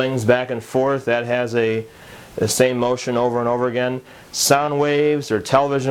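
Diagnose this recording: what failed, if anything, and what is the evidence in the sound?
Periodic clock jitter runs through the whole recording, at the converter stage. Interference is modulating the sampling clock at around 1 kHz, so every component of the sound carries sidebands spaced that far above and below it. This gives a rough, metallic edge that grows with higher content and disappears in silence.

Short concealed packet loss occurs from 4.65 to 4.69 s, a network fault handled by the decoder. About 20 ms of audio arrived too late to use, and the receiver filled that gap by extending the preceding sound. It then blended back into the real audio, which leaves a brief smear or wobble.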